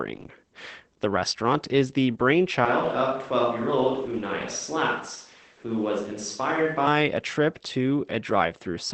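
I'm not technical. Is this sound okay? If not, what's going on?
No, it isn't quite okay. Throughout the clip the speech sounds muffled and a little hoarse, with a faint robotic edge, and the crisp top end of the sound is trimmed away. That is Opus voice compression: the recording was squeezed into a small file by a speech codec that describes the voice with a simplified model and drops the finest detail to save space. At this strength the damage is plainly audible.

There's also a sudden change from 2.65 s, right after "restaurant is the", until 6.87 s, just before "a trip". For those four seconds the voice turns hollow and roomy, loses some of its warmth in the low end, gets a bit quieter, and a faint background of room noise appears. Then it snaps back. This is a switch to a distant microphone, likely because the close microphone dropped out and a farther one, such as a camera's, filled the gap.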